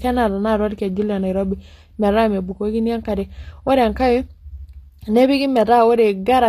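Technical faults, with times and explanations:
Throughout, HE-AAC compression: the speech carries plainly audible codec damage, with nothing above 14.9 kHz and a treble that sounds bright but synthetic, so s sounds come out gritty, metallic or lispy. The likely cause is spectral band replication, which copies lower bands upward under a coarse envelope, and that fits a low bitrate near 24 kbps. Unlike a simple lowpass or dull plain AAC, the highs are present but mismatched.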